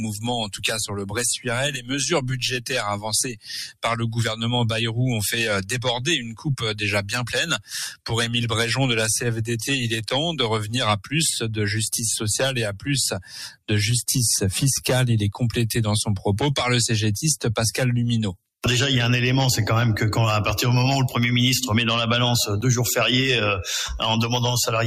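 Right from the start there's a noise suppressor applied to music or sounds, a speech-tuned one left running. It treats sustained material and tails as noise, so levels swing by around 10 dB and the sound pumps and thins as held parts sink while attacks get through.

The worst of it shows up as sound cut by the noise suppressor: from 0.0 to 3.84 s, 5.62 to 8.1 s, 10.62 to 11.14 s and 12.7 to 13.69 s. Sustained passages get pushed down by about 16 dB (about 11 dB in the third stretch), and decays get clipped short.

There are also two blocks of digital silence, at 10.09 s and 22.61 s, each a 10 ms gap, probably the output buffer not getting filled in time. Each one is a hard cut to nothing and back, heard as a tick or dip.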